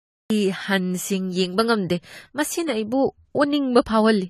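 From 0 to 0.30 s there is digital silence, then speech bursts in mid-sound with no attack: a cut-off start, unlike a fade-in's gradual rise.

Throughout, the speech sounds dull and warbly with nothing above 14 kHz, likely from AAC compression near 32 kbps; the fizzy smearing separates it from simple low-pass filtering.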